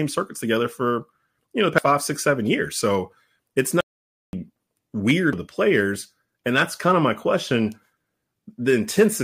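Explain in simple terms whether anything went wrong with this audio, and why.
Two tiny ticks with sudden jumps in the speech, at 1.78 s between "for you know the" and "five six seven years", and at 5.33 s just before "the players", are CD skips: the laser jumped tracks, briefly muting. From 3.81 to 4.33 s, half a second of speech vanishes into dead silence, an audio dropout to silence, likely from the input briefly disconnecting while recording continued.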